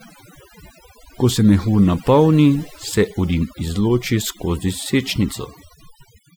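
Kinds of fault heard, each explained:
Overdone noise removal: the noise reducer on this speech was pushed way too hard, so it's clamping down any frequency band that sits close to what it thinks the noise floor is, and the softer parts of the voice get caught up in that too. It runs the whole way through, so the background drops with little twinkly specks popping in and out.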